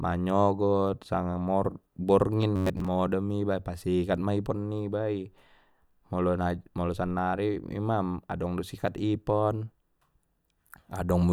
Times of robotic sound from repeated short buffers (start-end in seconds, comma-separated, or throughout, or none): 2.56-2.92